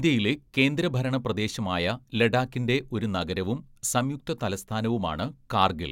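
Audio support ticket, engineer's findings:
No audible defects found in the speech; nothing to escalate.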